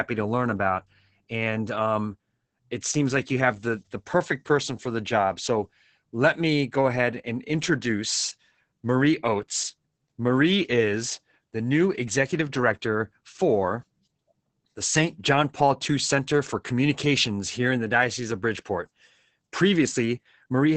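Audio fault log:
throughout: Opus voice compression, and heavy. The speech is cut off around 8 kHz and sounds muffled, hoarse and a bit robotic from coarse excitation coding, which fits roughly 10 kbps SILK.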